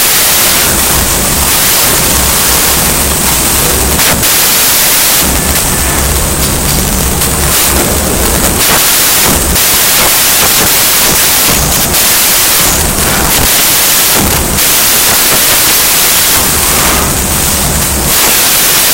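From start to finish, the speech comes with loud, harsh broadband noise. The samples are built from the wrong bytes. Each value is assembled misaligned or in swapped order, so the fast-changing low bits dominate.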